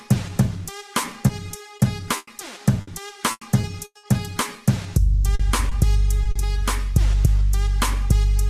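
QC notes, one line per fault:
1.27 to 4.05 s, repeated packet loss (robotic sound): eight gaps in under three seconds, none longer than 100 ms, totalling 480 ms, each patched by stretching the last bit of sound forward, so about 17% of the stretch is filled-in audio and it comes out choppy and robotic.
5.35 to 6.37 s, repeated packet loss (robotic sound): a shorter run, four gaps of up to 40 ms adding to 120 ms, concealed the same way by carrying the previous sound over the holes, about 12% of the span, giving the same broken, robotic texture.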